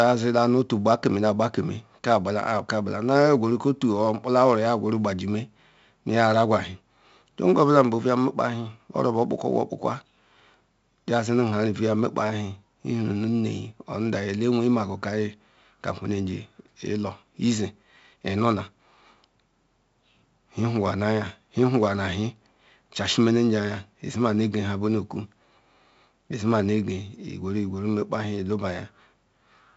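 Heavy 4-bit ADPCM compression runs throughout. Coarse 4-bit steps leave gritty hiss on loud speech. Nothing sounds above 7.7 kHz, which fits a 64 kbps stream.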